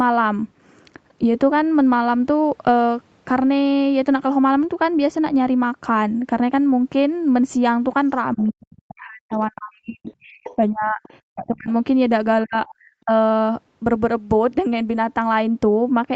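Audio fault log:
8.35–11.68 s and 12.44–13.11 s, speech suppressed in double talk: the talker's level drops sharply, by roughly 40 dB at worst in the first span and about 35 dB in the second, with around two seconds and a few tenths of a second gated. The likely cause is an echo canceller that could not separate near and far talkers and attenuated both.
8.37–8.41 s, 10.08–10.56 s, 11.03–11.10 s and 12.67–12.74 s, other side's voice leaking through: short scraps of a second voice sit about 25, 15, 30 and 25 dB below the main speech. These are likely residual loudspeaker echo that the canceller left in the microphone signal. They overlap the suppressed stretches, where the band-limited Opus call audio stops near 8 kHz.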